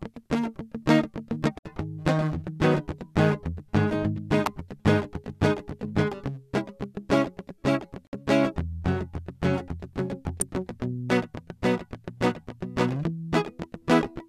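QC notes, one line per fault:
1.59–1.65 s and 8.07–8.13 s, gap at a join of encoded pieces: separately encoded music segments were joined untrimmed, so encoder delay and padding leave silences of about 65 and 59 ms with smeared edges.
4.46 s and 10.41 s, electrical switching spike: a sharp snap or tight cluster of clicks sits on top of the music each time, likely from a nearby switch or discharge arcing into the audio line.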